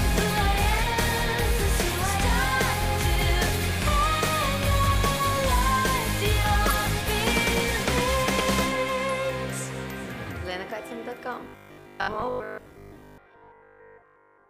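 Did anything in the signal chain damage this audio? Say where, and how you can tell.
Yes. At 9.69 to 9.72 s a short, harsh blip of misplaced noise cuts across the sound, out of character with what surrounds it. This is a corrupt frame decoded at the codec stage: damaged bits in roughly two consecutive compressed frames were played rather than concealed. Misread gains and spectral codes put energy at the wrong frequencies for about the span of those frames, which is why the burst is so brief and sharp.

From 11.44 s to the end, the sound turns rigid and metallic, with a steady 50 Hz buzz that loosely tracks the underlying audio but loses its natural movement. This is robotic sound from repeated short buffers, likely at the driver or buffer stage. Fresh audio arrived too slowly, so the last chunk was replayed to fill the gaps, and most of the real signal was skipped. Repeating a fixed span imposes its own pitch, and 50 Hz fits a 20 ms buffer.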